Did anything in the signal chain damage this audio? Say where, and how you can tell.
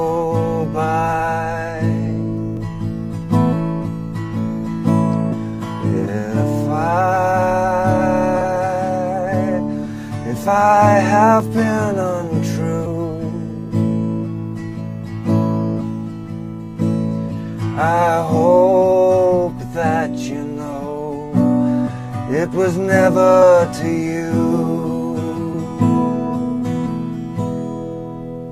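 Yes. At the driver or buffer stage, the capture side likely fell behind and the hardware overwrote samples, causing a dropped buffer (overrun). At 2.57 s and 11.4 s the sound jumps ahead with no silence, losing a few tens of milliseconds and then a shorter piece.

At the codec or storage stage, compressed frames were skipped at 5.31, 8.40, 10.47, 12.85, 23.41 and 25.53 s. Each jump spans whole 23.2 ms frames, from one to about five.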